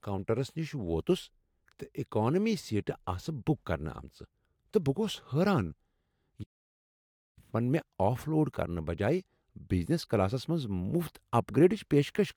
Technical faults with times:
6.43-7.39 playback stall

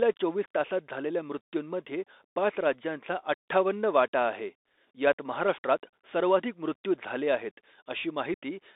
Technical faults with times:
0.00-8.76 Bluetooth CVSD headset codec
8.34-8.38 unconcealed Bluetooth headset packet loss

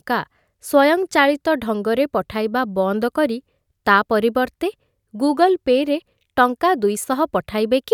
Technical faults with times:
none

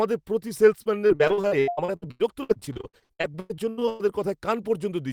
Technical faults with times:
0.83-4.01 repeated packet loss (robotic sound)

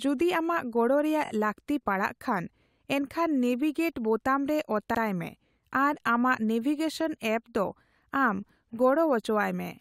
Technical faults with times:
1.25-1.29 repeated frames
4.94-5.00 repeated frames

